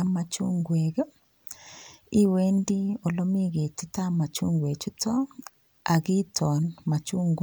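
Nothing in this recording of speech stands out as a technical problem; it just runs along without any glitch worth pointing to.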